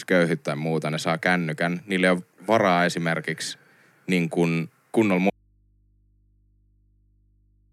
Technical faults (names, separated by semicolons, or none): audio dropout to a faint residue